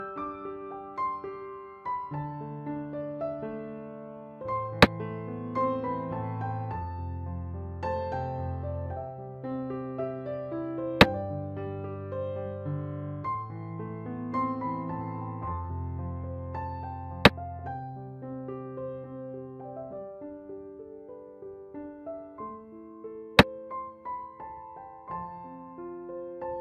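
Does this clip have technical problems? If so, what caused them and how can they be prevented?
No technical faults here.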